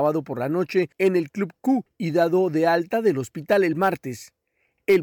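Brief crackle on peaks at 0.05–0.09 s, 0.78–1.08 s, 3.52–3.88 s and 4.90–4.97 s is hard clipping: the speech overdrives a stage by about 1, 2, 3 and 4 dB, flattening its peaks.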